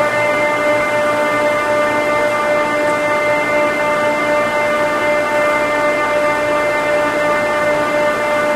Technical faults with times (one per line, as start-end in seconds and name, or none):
0.80 chunks out of order
7.74 chunks out of order